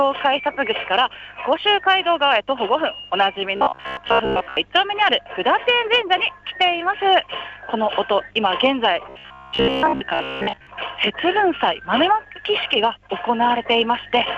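From 3.57 to 4.57 s and again from 9.09 to 10.67 s, the sound turns into a rigid, metallic buzz at about 66.8 Hz. That is robotic sound from repeated short buffers, likely caused by looping roughly 15 ms fragments while most of the real audio is skipped.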